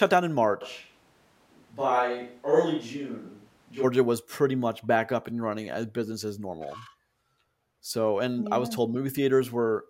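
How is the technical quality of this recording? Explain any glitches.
The recording has one clear glitch: a stretch of speech that sounds picked up from across the room. From 0.63 s to 3.82 s, right after "down in", the audio sounds like a switch to a distant microphone, with the close pickup most likely dropped in favour of one farther away. The speech turns hollow and roomy, thinner in the bass, and about 5 dB quieter, with background noise rising to roughly 35 dB below the speech. It snaps back to the close sound at "was pretty much back". On a waveform the segment shows a visibly smaller envelope with a raised floor between phrases. On a spectrogram the low frequencies fade, reverberant smearing trails each syllable, and hard vertical edges mark the start and end.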